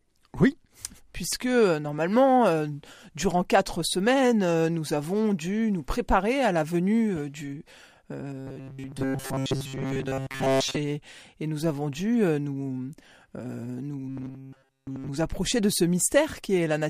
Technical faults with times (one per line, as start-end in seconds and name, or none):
8.36-10.76 robotic sound from repeated short buffers
14.08-15.09 robotic sound from repeated short buffers